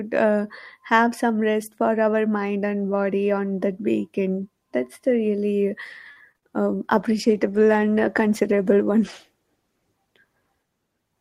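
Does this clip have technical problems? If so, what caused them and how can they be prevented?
Yes. Three kinds of fault are audible in this speech.

A short stall from a late packet comes at 6.11 to 6.18 s, just after "the really". A packet arrived late and the jitter buffer ran dry. The last sound was held for 46 ms, then speech resumed from the same place. Nothing was lost, but playback now runs 46 ms later. A deeper jitter buffer would absorb this lateness.

Two short concealed packet losses follow, at 6.32 to 6.36 s and 6.38 to 6.52 s, still after "the really". About 20 ms and then 40 ms of audio never reached the decoder. The receiver filled each gap by extending the preceding sound, which leaves a brief smear. The second repair also added a little delay. Forward error correction or a steadier network path would prevent these losses.

A call bitrate drop runs from 6.95 to 10.95 s. 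The bandwidth estimate fell, so the encoder went from 48 to 17 kbps. It stayed at the lowest rate for about 2.9 s. The speech sounds coarser and duller for that stretch. More reliable bandwidth, or a higher minimum bitrate, would avoid this.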